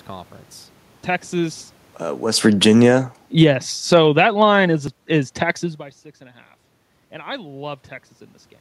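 A speech recording with two technical faults. From 2.15 s to 4.19 s the level sinks steadily, by about 14 dB in total. The room noise sinks with it, which marks this as automatic gain falling rather than the talker moving, as happens near 2.0 s. The gain control judged the input too loud or its background noise too strong and pulled its gain down gradually. The speech starts out loud and then settles lower along with its background. At 4.88 s there is a small jump in the speech. No gap of silence is heard. A short stretch, around 15 ms, is simply missing, and the two sides butt together. The likely cause is a dropped buffer (overrun): the samples were not read in time and were overwritten. The level change near 5.5 s comes from the talker moving.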